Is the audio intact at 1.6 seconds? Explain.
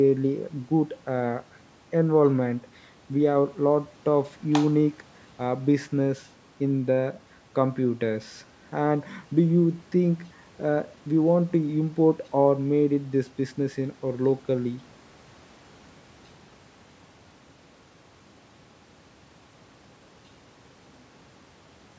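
Yes, the speech at 1.6 s is intact, with nothing wrong at that moment beyond the normal call microphone processing, which trims the deepest bass and leaves nothing above 8 kHz.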